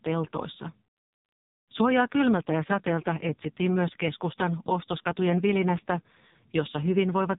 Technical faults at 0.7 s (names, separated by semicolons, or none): AMR narrowband mobile codec